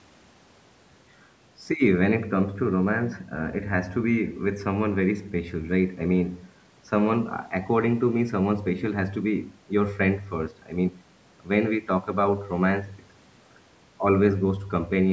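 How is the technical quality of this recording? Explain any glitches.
The technical quality of this recording is sound, with no glitches to explain.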